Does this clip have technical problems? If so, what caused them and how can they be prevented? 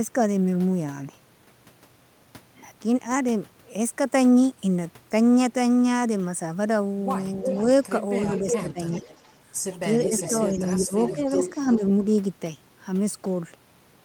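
Yes. An echo leak appears at 7.48–7.87 s, 8.3–9.33 s and 10.0–11.78 s: a distinct copy about 0.37 s late, only a few dB quieter, unlike reverb's smooth tail. The likely cause is a loudspeaker echo canceller letting far-end sound back through. Headsets or better acoustic echo cancellation prevent it.

Speech suppressed in double talk occurs at 8.49–9.04 s and 10.84–11.41 s, with dips of about 10 to 15 dB lasting a few tenths of a second. These are partial dips, not silent gaps like packet loss, and they occur while the echo overlaps, likely because the echo canceller turned down both its talker and the loudspeaker echo. Full-duplex-capable echo cancellation with gentler suppression during double talk prevents it.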